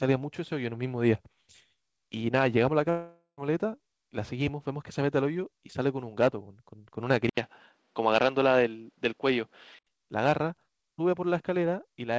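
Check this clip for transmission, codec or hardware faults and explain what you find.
Two faults stand out in this speech clip: a gap where audio went missing, and a stretch where the sound turns duller.

Long network dropout, 2.90 to 3.40 s. A run of incoming audio likely never arrived, so the receiver had nothing to play for about 480 ms. It covered the hole by carrying the last sound forward as a buzz or hiss that fades out, with about 100 ms of silence before the speech returns. When the speech resumes, roughly half a second of it is simply gone, and the talk jumps ahead rather than picking up where it stopped.

Input switched to a poorer device, 7.30 to 9.87 s. About 80 ms of silence marks the change, and then the sound becomes duller: nothing reaches above 6.5 kHz, below the 8 kHz ceiling the call path otherwise passes (consistent with G.722 at 64 kbps). Loudness stays about the same, but a faint new background noise, roughly 45 dB under the speech, comes in with the narrower band, pointing to the recording likely jumping to a weaker microphone or headset profile.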